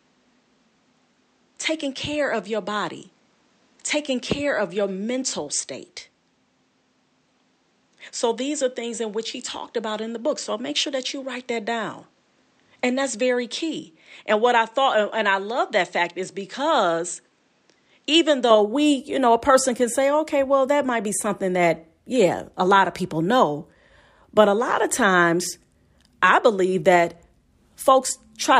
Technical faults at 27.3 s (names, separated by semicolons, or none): none